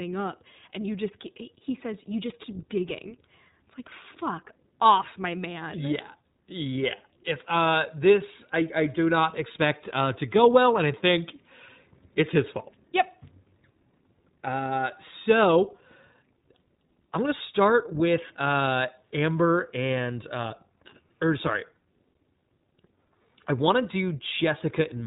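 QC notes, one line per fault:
throughout, iLBC codec: the speech is band-limited, with nothing above 3.8 kHz, and has a plainly audible rough, slightly synthetic texture. Each short block of the signal's excitation is rebuilt on its own rather than carried over from the last, and the roughness suggests 20 ms frames at roughly the 15.2 kbps mode. On a spectrogram, energy stops at a hard ceiling near 3.8 kHz with smeared, blocky harmonics below it.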